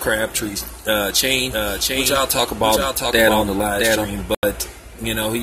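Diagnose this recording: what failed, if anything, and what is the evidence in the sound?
From 1.37 to 4.05 s there is a doubled audio track: a full-band copy about 5 dB quieter trails the original by roughly 0.7 s, with no decay or room colour. Its likely cause is a second, slower capture path or an edit. The spectrogram shows repeated patterns shifted in time, starting and stopping abruptly.

At 4.35 s the sound drops out for 84 ms and resumes at 4.44 s as though it had kept playing. This is a Bluetooth dropout, likely at the playback link, where late packets were discarded, which fits several lost packets. The waveform shows a flat gap.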